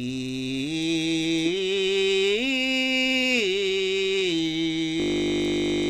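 At 5.0 s the music stops moving forward and turns into a steady buzz until the end at 5.89 s. This is a system hang loop. The computer or its audio driver froze, but the sound hardware kept replaying the same stretch of its ring buffer. That stretch is 20 ms long. It repeats exactly, about 45 times, at 50 Hz. The result is a flat tone at that rate rather than a stutter. About a second of music is lost.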